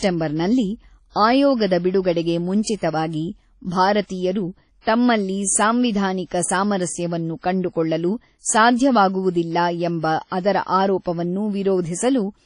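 It's a speech clip, and the whole thing has that ringing, washy character with a hiss that breathes along with the voice, plus nothing at all above about 10.1 kHz. That points to WMA compression at a low bitrate, likely something around 32 kbps, where the encoder smears quantisation noise across long blocks and drops weak detail. There's also a pre-echo at 4.81 to 4.87 s, just before "ತಮ್ಮಲ್ಲಿ ಸಾಂವಿಧಾನಿಕ ಸಾಮರಸ್ಯವನ್ನು ಕಂಡುಕೊಳ್ಳಲು": a short hiss leaks in about 59 ms ahead of the attack, which lands late in a transform block, so the onset comes across soft and smeared.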